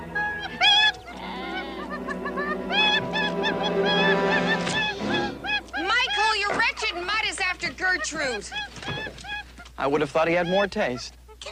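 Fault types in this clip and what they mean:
No faults detected in this clip.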